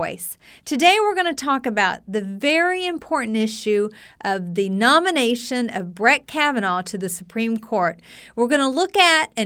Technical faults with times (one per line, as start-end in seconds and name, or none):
none